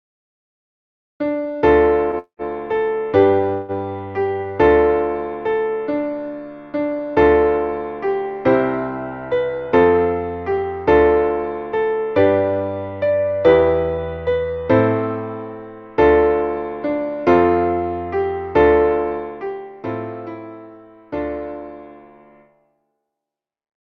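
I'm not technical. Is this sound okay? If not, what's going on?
No. There are three kinds of fault.

Call audio freeze: at 2.19 to 2.42 s and 3.53 to 3.72 s, data likely got held up in transit, so the last sound stretches into a fading buzz before it resumes.

Jitter buffer speed-up: from 9.69 to 10.64 s, the receiver had too much backlog and snipped out tiny pieces, so the sound runs about 15% fast and seems hurried.

Zipper noise: from 19.15 to 19.73 s, the volume drops in about 100 small, unsmoothed steps per second instead of gliding, so you hear a fine ticking as it quietens.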